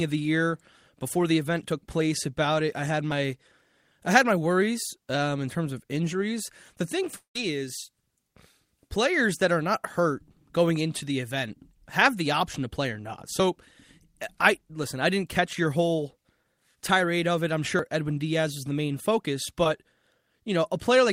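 At 3.12 s, just after "about it I had", a jump forward of a few tens of milliseconds, likely a dropped buffer (overrun). The waveform shows an abrupt splice with no gap.

From 7.16 to 7.36 s, 190 ms of audio never arrives, likely a long network dropout. The last sound is stretched into a fading buzz, then about 120 ms of near-silence appears as a pale blank band on the spectrogram.

At 13.40 s, after "to play or not", another hard-edged splice and skip, likely a dropped buffer again.

At 17.79 s, after "tirade of it I'm", a larger skip of about 150 ms, likely another dropped buffer.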